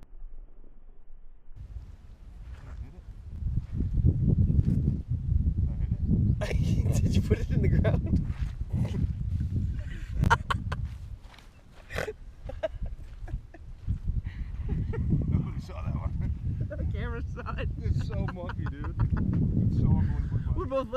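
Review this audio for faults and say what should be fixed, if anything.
Chunks out of order at 3.32–3.38 s and 10.24–10.28 s: a 20 ms chunk plays two, then one, chunk-lengths late, giving jumbled moments. Unlike dropouts, nothing is missing. Reorder incoming chunks by sequence number before playback.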